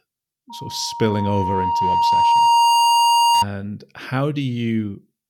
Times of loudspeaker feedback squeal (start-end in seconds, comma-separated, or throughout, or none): 0.49-3.45